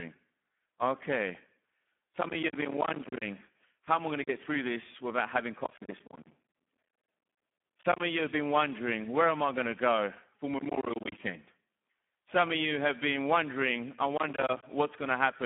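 For the full length of the speech, Speex codec damage is heavy, which fits a setting near 8 kbps. Starved excitation makes the voice noisy and hoarse, unlike clean telephone band-limiting. The band is held to 200 Hz–3.4 kHz, with nothing above 3.8 kHz.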